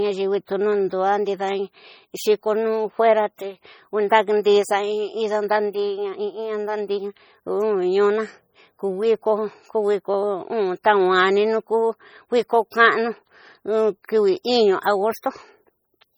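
Heavy MP3 compression runs from start to finish, most likely from a low-bitrate encode; the degree of damage fits roughly 32 kbps. With too few bits, the encoder discards weak frequency lines, and they flicker in and out between frames. The speech takes on a watery, swirling texture, sibilants turn into metallic chirps, and consonant onsets smear. Content still extends to about 21.1 kHz, so the damage comes from unstable detail rather than a lowered treble cutoff.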